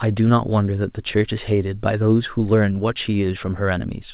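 No faults to report in the speech; the A-law G.711 telephone coding at 8 kHz sampling sounds as that path should, narrow telephone bandwidth and a faint quantisation floor that follows the level.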